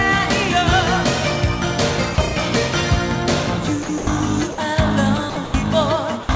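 At 2.15–2.18 s, 3.83–3.89 s, 3.98–4.07 s, 4.52–4.58 s, 5.30–5.36 s, 5.45–5.54 s and 6.23–6.29 s, the sound briefly gives way to flat, steady noise for 30 to 90 ms before returning. These are likely sounds dropped by the voice detector: the sender classed those moments as background and stopped transmitting, and the receiver filled the gaps with comfort noise. The call path's audio contains nothing above 8 kHz, which fits a wideband G.722 codec.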